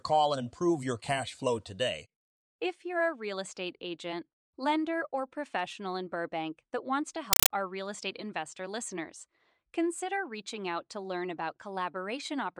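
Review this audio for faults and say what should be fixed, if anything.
From 7.33 to 7.50 s, between "that wants to" and "our real estate investor", a compressed stream was played as audio. The receiving end took an encoded Dolby Digital stream, likely AC-3 at around 256 kbps, as plain PCM samples instead of decoding it. Each encoded frame comes out as a 5.33 ms burst of noise followed by silent padding, repeating 31.25 times a second. The speech is replaced by a harsh, loud, chattering static. To prevent it, make sure the digital link flags the stream as non-audio so the sink decodes it, or send PCM only.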